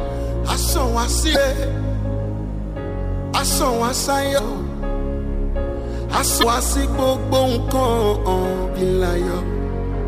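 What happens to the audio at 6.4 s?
From 6.39 to 6.43 s there is damaged data in the compressed stream. Corrupted bytes make the decoder misread those frames and lose sync until it finds the next frame header, producing a brief chirp, squawk, click or short hole.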